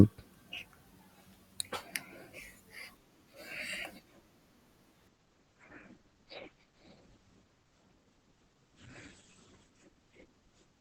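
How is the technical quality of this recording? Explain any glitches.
Quality changes partway through, with the second half noticeably degraded. From 5.08 s to the end of the clip, the adaptive stream drops to a lower bitrate. The player switched to a cheaper encoding, abruptly and without a gap. Nothing above 8.6 kHz remains, sibilants turn dull, and codec artefacts rise. This points to an Opus stream stepping down from roughly 64 kbit/s to 12 kbit/s.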